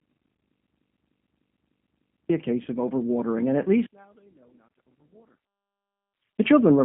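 The call path runs the speech through a G.729 codec for the whole clip. The encoder models each 10 ms slice of speech as a vocal tract filter, a pitch predictor and a few pulses, which fits an 8 kbit/s coder. The line confines everything to roughly 150 Hz to 3.4 kHz. The damage is plainly audible: the speech sounds thin, slightly rough and synthetic, with a muffled top end.

From 0.37 to 0.39 s, VoIP packet loss concealed by the speech codec removes about 20 ms of audio. The decoder fills the gap by extending its last pitch and filter state at falling gain, so the sound briefly smears into a buzzy tone or coloured noise that fades. The same happens from 2.63 to 2.67 s, just before "of overwatering and at". The concealment again covers about 20 ms, and because each frame builds on the previous one, the speech stays weak and distorted for a moment after real packets resume.

From 3.86 to 6.39 s, just after "of overwatering and at", the level drops by about 35 dB, and what remains is a faint trace of the speech. 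The likely cause is one channel inverted: with one side's polarity reversed, the centred speech cancels when the two channels are summed to mono, leaving only the small difference between them.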